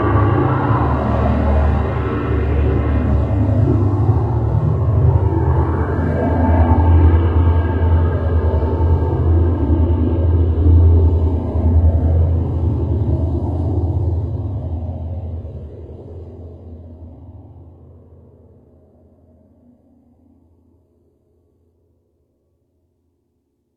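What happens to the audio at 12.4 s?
At 12.4 s you're inside a stretch where the adaptive stream is at a lower bitrate, from 9.73 s to 21.73 s. The connection slowed, so the player switched to a leaner version of the stream. The top end thins out and turns synthetic, with more codec artefacts, which fits a drop from roughly 96 kbit/s AAC to a 20 kbit/s HE-AAC stream. The switch is abrupt but leaves no gap.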